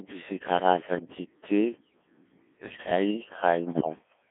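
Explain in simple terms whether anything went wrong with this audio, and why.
Throughout, the speech sounds robotic and buzzy, confined to a narrow telephone-like band. This is the Codec 2 vocoder: instead of keeping the actual waveform, it sends only a rough outline of pitch, loudness and tone, and the receiver rebuilds a synthetic voice from that, losing much detail.

From 2.68 to 2.86 s the voice briefly jumps and warbles into garbled, bleepy sound. These are bit errors on digital voice radio: a few percent of the received bits arrived flipped, and because each bit controls the pitch or tone of a whole chunk of sound, a handful of bad bits scrambles that short stretch.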